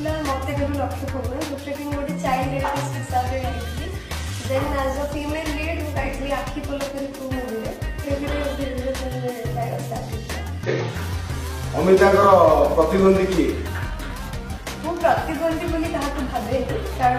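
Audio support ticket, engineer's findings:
Damaged data in a compressed stream at 0.47–0.52 s, 7.99–8.05 s and 10.64–10.70 s: brief glitches, about 55–60 ms each. Probable component: decoder input. Corrupted frames are misread or rejected, sync is lost, and the decoder hunts for the next frame header.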